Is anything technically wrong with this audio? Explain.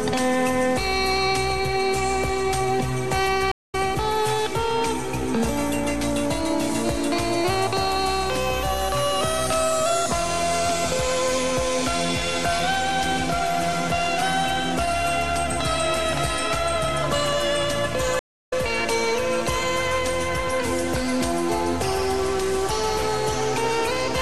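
Yes, there are two stream reconnects, at 3.52–3.75 s and 18.19–18.53 s. The connection dropped and a fresh decoder restarted mid-stream, so the audio goes silent for 205 ms, then 311 ms, and resumes roughly 0.2 s and 0.3 s further along, skipping that material.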